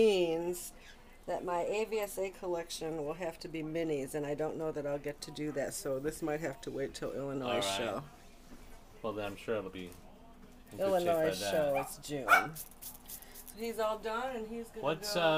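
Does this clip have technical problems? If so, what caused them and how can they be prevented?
Yes, two drift correction steps: 0.95 to 2.30 s plays 5.8% fast and about a semitone sharp; 5.68 to 7.20 s plays 5.8% slow and a semitone flat. These are likely clock-sync software jumping the playback rate to rebalance its buffer. Use gradual, fine-grained resampling to correct drift instead.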